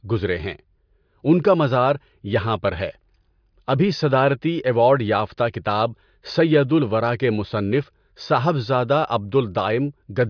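No technical faults can be heard anywhere in this speech recording; the signal stays continuous and intact throughout.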